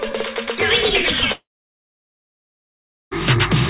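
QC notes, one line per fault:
1.32–3.13 s, long network dropout: the sound trails into a short fading buzz, then about 1.7 s of near-silence, and resumes with 1.8 s missing. Packets likely stopped arriving, so the receiver stretched the last sound briefly before falling silent.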